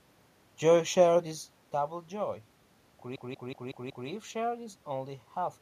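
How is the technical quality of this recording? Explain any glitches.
The recording has one clear glitch. From 3.16 to 4.09 s, just before "shared is only", a system hang loop occurs: the system froze while the audio hardware kept replaying its ring buffer, so one 186 ms slice repeats five times at about 5.4 Hz. This is a machine-gun stutter, consistent with an 8192-sample buffer.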